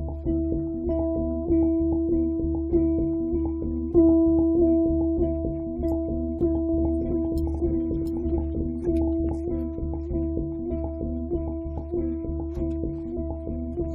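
A second capture path or an out-of-step edit likely mixed the same audio in twice, producing a doubled audio track from 6.69 to 9.29 s. A full-band copy about 5 dB quieter trails by about 0.7 s, dry and without decay, starting and stopping abruptly.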